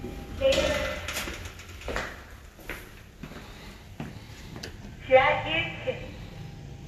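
Nothing in the sound stood out as a technical fault on listening.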